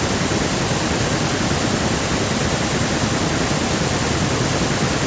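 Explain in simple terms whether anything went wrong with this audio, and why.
Nothing went wrong with this speech recording; it just passed through a call's normal microphone processing, which trims the lowest bass as it is meant to.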